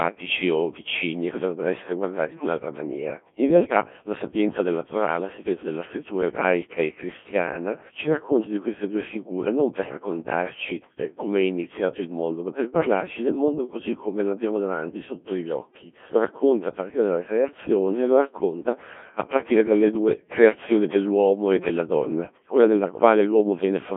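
Throughout, Codec 2 vocoding rebuilds speech from sine waves, so it sounds robotic and buzzy. The spectrogram stops at 3.7 kHz, which fits a 1.3 kbit/s mode.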